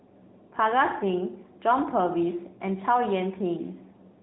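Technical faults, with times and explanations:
Throughout, AMR narrowband mobile codec. Nothing above 3.8 kHz survives. Each 20 ms frame rebuilds the speech from a vocal-tract model and a few pulses, so it sounds plainly buzzy and synthetic. The damage fits a high-rate AMR-NB mode near 10.2 kbps.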